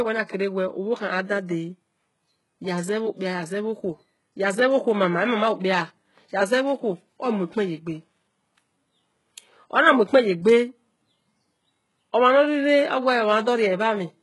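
Speech runs through heavy HE-AAC compression for the full length, with nothing above about 11.5 kHz. The treble is present, yet s sounds come out gritty and metallic, because the top band is a copy of lower bands reshaped by a coarse envelope, likely from spectral band replication at a very low bitrate around 12 kbps. Plain low-pass filtering would instead sound dull, and ordinary MP3 damage would swirl rather than rasp.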